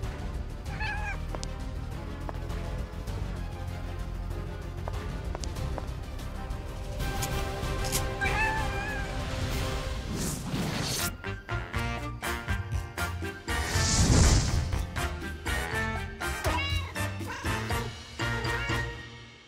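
Wrong sample rate from 1.97 to 3.35 s: the sound plays 1.09 times too fast and about 1.5 semitones sharp, which fits 44.1 kHz audio played back at 48 kHz.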